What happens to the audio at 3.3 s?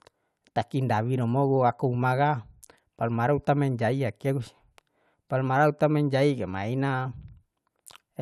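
Nothing goes wrong at 3.3 s; the speech carries on intact through that moment, with no dropout, click or distortion to be heard.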